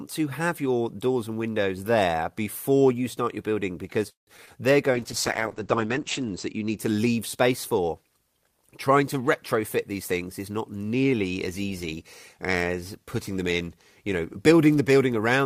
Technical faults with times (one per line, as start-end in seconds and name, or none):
4.09-4.29 call audio freeze
4.37-4.49 short concealed packet loss
4.95-6.83 call bitrate drop
9.55-11.95 jitter buffer speed-up